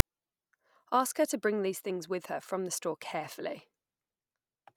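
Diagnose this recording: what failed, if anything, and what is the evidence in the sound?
Storage and file parsing failed at the very start: file tags were played as audio. At 0.0 s a brief, hard-edged rasp sits off to one side of zero, then drops straight to silence. The decoder read the tag block as samples. Its text bytes form a lopsided, buzzy waveform, and the zero padding after it decodes as silence. The whole event lasts well under 20 ms.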